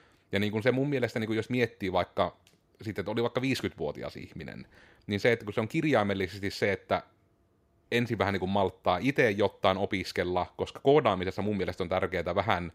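No technical faults are audible.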